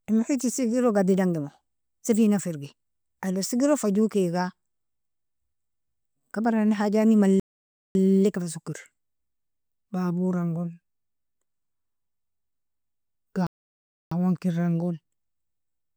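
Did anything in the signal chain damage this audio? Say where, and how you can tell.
Yes, at the playback stage: the speech suffers two playback stalls. The output drops to dead silence from 7.40 to 7.95 s (about 0.55 s) and again from 13.47 to 14.11 s (about 0.65 s), cutting off the sound mid-flow each time before it resumes. The likely cause is the player running dry of buffered data, or its output thread being blocked, so nothing reached the device until it caught up.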